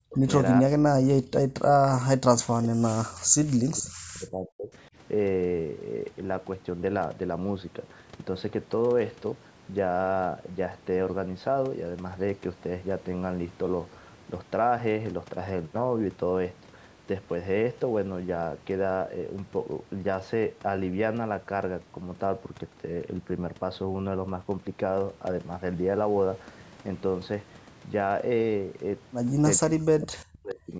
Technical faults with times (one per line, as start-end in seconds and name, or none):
0.00-0.27 speech suppressed in double talk
0.62-4.74 speech suppressed in double talk
29.58-30.75 speech suppressed in double talk